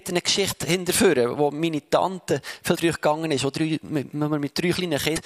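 Short bursts of damaged data in a compressed stream disrupt the audio at 0.47 to 0.53 s, 2.73 to 2.78 s and 5.13 to 5.18 s, each a brief glitch lasting about 50 to 60 ms where the decoder misreads corrupted frames and loses sync. On a spectrogram each appears as a narrow vertical break, and on the waveform as an abrupt discontinuity.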